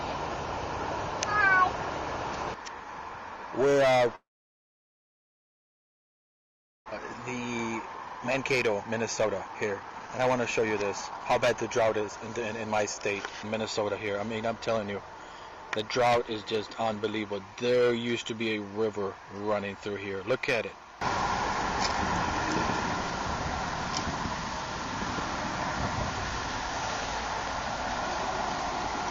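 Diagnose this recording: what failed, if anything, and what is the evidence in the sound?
Long network dropout, 4.15 to 6.94 s, at the network stage. The audio stops; the last sound is briefly stretched into a fading buzz, then about 2.6 s of silence follows. When sound returns, about 1.6 s of material is simply gone. This is likely a stall in packet delivery: the receiver concealed the gap for about a tenth of a second, gave up, and resumed about a second later in the stream than before.

Jitter buffer speed-up, 7.83 to 14.72 s, in the receiver's playout buffer. The audio runs at about 116% speed with its pitch unchanged, giving a hurried quality across almost 7 s. Packets evidently piled up and the buffer held far more than its target. To drain it, the receiver repeatedly cut out short pitch-period-sized slices, removing roughly a second in total and pulling the delay back down.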